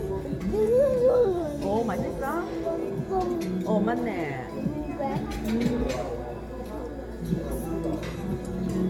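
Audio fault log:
Throughout, generation loss: the sound has likely passed through a lossy codec repeatedly, about five times, in what points to an AAC-LC chain at around 96 kbit/s. Each pass re-quantises the signal on a shifted frame grid, so the errors stack instead of staying put. The result is a swirly, hollow, smeared texture beyond what a single encode at that rate would leave, with blurred attacks and nothing above 17 kHz.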